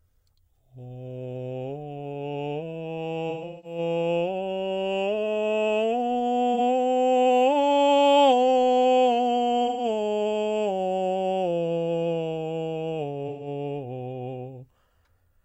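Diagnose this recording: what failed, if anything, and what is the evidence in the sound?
The codec stage failed: AAC frame loss with concealment. Smeared, phasey patches appear at 3.29–3.78 s, 6.54–6.60 s, 9.65–9.84 s and 13.28–13.47 s. The decoder re-synthesises each missing stretch from the last good spectrum. Unlike plain dropouts, the music never goes silent, and the lost audio in each patch totals a multiple of about 43 ms, which fits whole lost codec frames.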